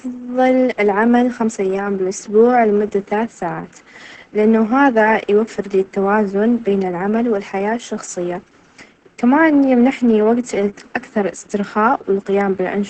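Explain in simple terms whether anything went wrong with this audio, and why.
Opus voice compression runs through the whole recording. To fit the speech into very little data, the coder drops everything above about 8.6 kHz and describes the voice only roughly, so it sounds muffled, hoarse and a little robotic from start to finish.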